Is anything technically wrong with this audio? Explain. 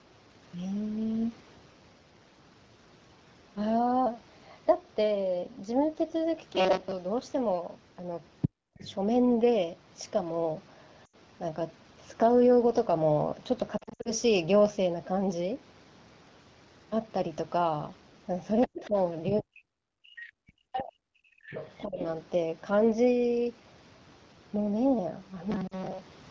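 Yes. The clip is speech carried over an AMR wideband call path, and it has five kinds of fault.

Robotic sound from repeated short buffers, 6.55 to 6.96 s and 25.51 to 26.31 s: the speech turns into a stiff, metallic buzz at 188 Hz that still loosely follows the syllables. The likely cause is audio arriving too late, so the player loops the last few milliseconds instead of playing fresh signal. A 188 Hz repeat fits a block of about 5.3 ms. On a spectrogram, the normal pitch contour is replaced by flat, evenly spaced horizontal harmonics. The waveform shows one short shape repeated over and over.

Other side's voice leaking through, 8.41 to 8.94 s (about 5 dB below the talker), 18.61 to 19.41 s (about 15 dB below), 20.15 to 20.83 s (about 20 dB below) and 21.45 to 21.86 s (about 15 dB below): a second voice sits under or between the talker's speech. This is likely loudspeaker sound that the echo canceller did not fully remove from the microphone. 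A spectrogram shows a separate set of harmonics with their own pitch movement.

Background gated by the echo canceller, 8.49 to 8.74 s (deepest drop about 39 dB) and 21.28 to 21.45 s (about 28 dB): the room tone suddenly falls away and then returns. This happens because the canceller clamped the microphone while the loudspeaker was active. The first event totals roughly 300 ms and the second roughly 150 ms. On a spectrogram, the broadband noise floor turns into an almost empty, dark block with sharp edges.

Lost AMR speech frames, 11.05 to 11.15 s (80 ms), 13.78 to 14.12 s (200 ms scattered over 280 ms, longest gap 60 ms) and 25.67 to 25.75 s (40 ms): the sound briefly warbles, smears and sags, then comes back slightly rough. The decoder bridged the missing frames by reusing the last good pitch and vocal tract settings at falling gain. The waveform shows decaying, overly regular stretches. 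A spectrogram shows held, blurred formants that fade.

Speech suppressed in double talk, 18.67 to 21.00 s (deepest drop roughly 40 dB, about 1.5 s affected in total) and 21.85 to 22.01 s (about 20 dB): the talker's speech is turned down while the leaked voice overlaps it. The likely cause is the echo canceller failing to tell the talker apart from the echo and attenuating both. On the waveform, the envelope collapses in patches.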